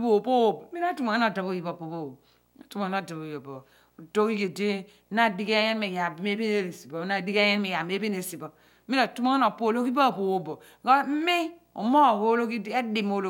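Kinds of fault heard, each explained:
Video or display buzz: a screen or video cable is leaking into the audio. A 59.94 Hz buzz at the picture's field rate runs under the speech throughout, topped by hash. A thin line-rate tone sits at 15.7 kHz. The interference stays about 45 dB below the speech.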